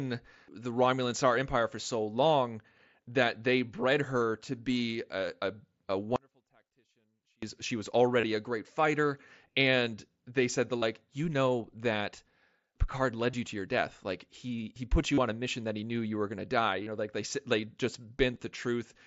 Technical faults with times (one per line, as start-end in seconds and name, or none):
6.16-7.42 audio dropout to a faint residue
8.21-8.23 concealed Bluetooth headset packet loss
10.79-10.82 concealed Bluetooth headset packet loss
13.31-13.33 concealed Bluetooth headset packet loss
15.14-15.18 concealed Bluetooth headset packet loss
16.83-16.87 concealed Bluetooth headset packet loss
18.34-18.40 concealed Bluetooth headset packet loss